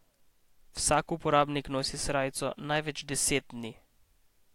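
No technical faults occur at any point in the recording, so there are none to describe in time order.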